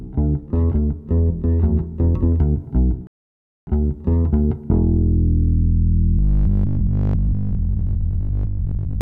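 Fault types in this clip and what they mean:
rebuffering stall: The player ran out of downloaded audio and halted until more data arrived. Here the sound drops to silence at 3.07 s and resumes at 3.67 s, continuing from exactly where it stopped. No material is lost. The gap simply inserts 0.6 s of extra time, so everything after it plays that much later than it would have without the interruption.
robotic sound from repeated short buffers: From 6.19 s to 9.01 s the sound becomes a rigid, metallic buzz at 50 Hz that still loosely follows the shape of the underlying audio. A 50 Hz buzz matches a 20 ms repetition period, which fits a short segment being replayed over and over. The likely cause is audio arriving too seldom, with playback filling the gaps by repeating the last buffer, so around seven tenths of the real material is skipped.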